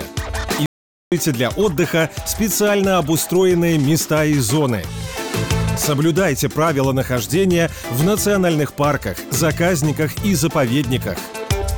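At 0.66 s the sound cuts out abruptly and returns at 1.12 s, an audio dropout to silence lasting about 0.46 s. The gap is silent with no room tone, most likely because the input was lost briefly while recording continued writing silence.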